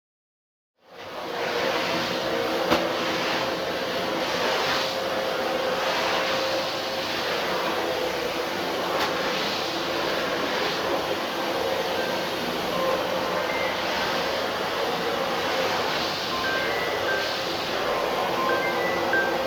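A recording of sounds with nothing technically wrong with it.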